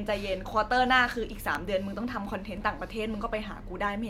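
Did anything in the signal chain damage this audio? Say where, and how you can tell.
Yes. The damage sits at the buffer between two devices: clock drift buffer slips. From 0.52 s to 3.60 s the speech carries clicks that recur every 1.02 s, four in all, a spacing regular enough to point away from the source. Likely cause: two converters running on independent clocks differing by a few hundred ppm, so the buffer between them slowly fills or drains until a short block, roughly fifteen samples, is dropped or repeated.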